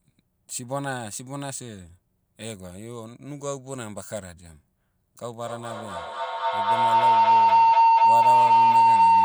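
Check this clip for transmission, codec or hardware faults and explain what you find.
One fault, a feedback howl, runs from 5.27 s to the end of the clip. Two devices in the same room are looping microphone to loudspeaker and gaining level each pass, so a tone near 1 kHz swells to about 16 dB above the speech, pulsing roughly every fifth of a second. A spectrogram shows a thickening horizontal line; the waveform shows a swelling, throbbing envelope.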